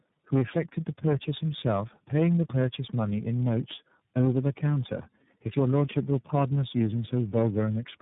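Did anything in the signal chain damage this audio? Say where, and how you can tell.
Yes. At the codec stage, the whole clip shows tandem speech coding: speech is rough, muffled and warbly throughout, with nothing above 3.8 kHz. The call was likely decoded and re-encoded across about four speech codecs in series, each one adding its own errors on top of the last.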